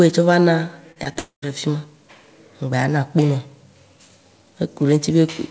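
Around 0.92 to 0.98 s, then 1.04 to 1.07 s and 1.13 to 1.17 s, short concealed packet loss smears the speech briefly as the receiver papers over 40, 20 and 20 ms gaps. Right after, from 1.19 to 1.44 s, the sound turns into a fading buzz and then about 120 ms of silence before "ɖe fima", likely a long network dropout losing about a quarter second. Through the call path, nothing comes through above 8 kHz.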